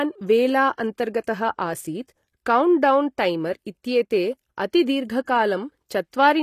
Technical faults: HE-AAC compression; pre-echo

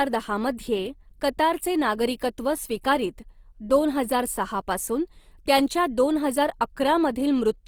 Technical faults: Opus compression

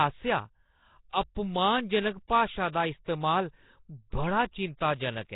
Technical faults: Nellymoser compression

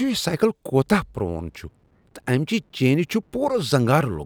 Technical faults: none

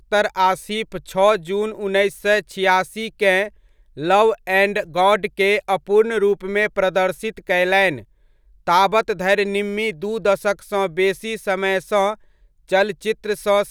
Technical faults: none

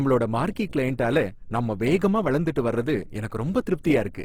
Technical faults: Opus compression

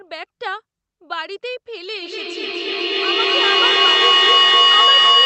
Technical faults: feedback howl

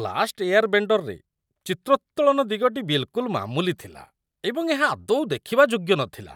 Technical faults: none

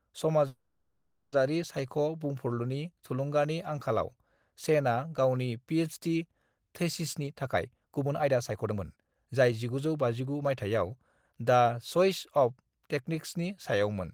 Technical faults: call audio freeze; jitter buffer speed-up

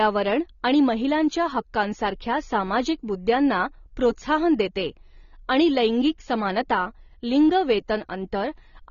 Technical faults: AAC compression

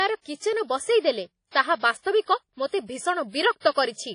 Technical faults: WMA compression

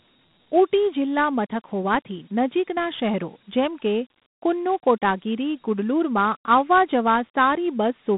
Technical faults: Dialogic VOX ADPCM

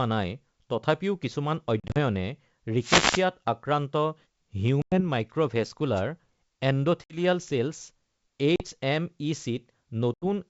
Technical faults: packet loss on an ADPCM call; wireless microphone noise hit

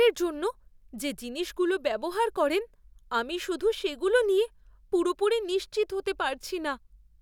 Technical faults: dropped buffer (overrun)

